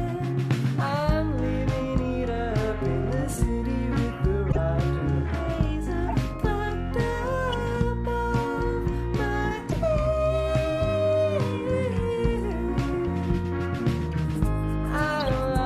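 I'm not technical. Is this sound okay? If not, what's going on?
No. Corrupt frame decoded at 3.32–3.39, 4.48–4.58, 6.03–6.14, 7.53, 9.69–9.76 and 15.20–15.28 seconds: damaged chunks of compressed data were played anyway, causing brief chirps or noise bursts.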